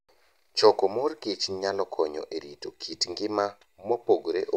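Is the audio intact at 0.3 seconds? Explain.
Yes, the speech at 0.3 seconds plays through cleanly, with no dropout, click, distortion or other fault at that moment.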